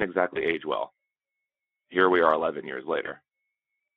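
Speech over a Speex-coded phone-band line shows VoIP packet loss concealed by the speech codec at 0.34–0.42 s and 3.05–3.13 s. Each gap, fitting one lost 20 ms frame, is bridged by a fading, extrapolated buzzy tone or coloured noise rather than silence or a click.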